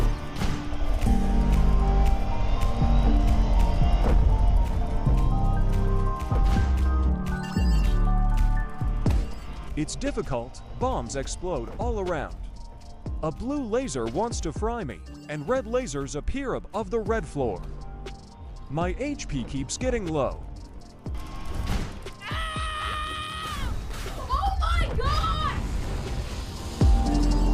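No technical faults detected.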